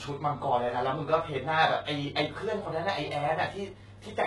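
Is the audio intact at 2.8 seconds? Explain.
No. At 2.8 seconds the speech carries HE-AAC compression damage, as it does across the whole clip. The damage is heavy. Nothing sounds above 11.5 kHz. The treble is likely rebuilt by spectral band replication, with lower bands copied upward and shaped only roughly. Its harmonics do not line up with the real ones below. Sibilants come out gritty, metallic or lispy. That fits a very low bitrate, around 12 kbps.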